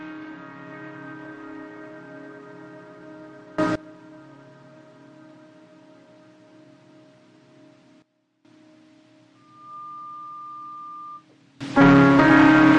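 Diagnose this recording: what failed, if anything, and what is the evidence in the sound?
Sudden gain jumps: the level leaps by about 24 dB at 3.58 s (to 3.76 s), drops by about 17 dB at 8.02 s (to 8.45 s), and rises about 24 dB again from 11.61 s to the end. Sound and background shift together. On a waveform the envelope steps abruptly at each edge. The likely cause is a digital gain stage in the driver or processing that applies new values without a ramp.

Loudspeaker feedback squeal: from 9.35 s to 11.26 s a single 1.2 kHz tone swells over roughly 0.4 s and sits about 5 dB above the programme sound. On a spectrogram it is a bright horizontal line. The acoustic path from loudspeaker to microphone has loop gain above one at that frequency.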